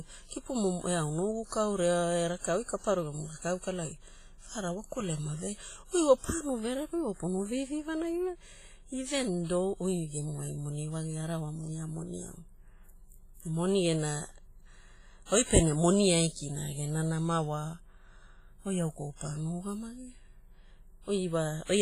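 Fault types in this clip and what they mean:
WMA compression: The speech has a ringing, washy quality throughout, with a hiss that swells and fades along with the talking, and nothing comes through above about 15.4 kHz. The damage is heavy and the likely cause is a low-bitrate WMA encode, somewhere around 24 kbps by the sound of it. Its long transform blocks smear quantisation noise over tens of milliseconds, and quieter spectral detail simply gets thrown away.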